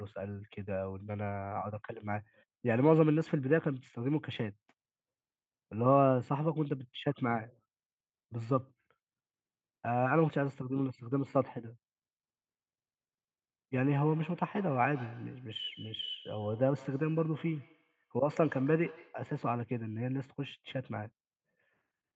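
From 13.9 s to 19.3 s the speech is followed by a feedback echo between two devices. A second device in the same room plays the call back, and the first microphone picks it up again. Its echo canceller only removes its own playback, so each word returns at a fixed interval of roughly 150 ms, thinner and more ringing each pass. The repeats peak about 22 dB below the speech and decay rather than build up. The audio throughout is band-limited to 8 kHz, which fits a wideband Opus call stream.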